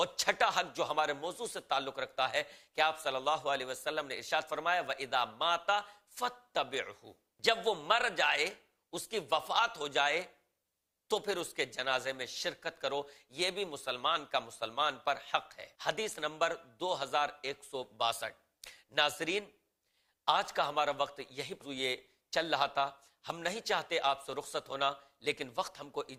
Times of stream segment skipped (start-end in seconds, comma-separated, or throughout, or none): 21.61-21.64